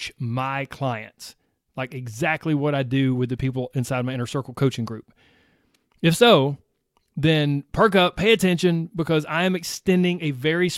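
Nothing in this bit of speech catches the ear as a technical fault, so there's nothing to flag here.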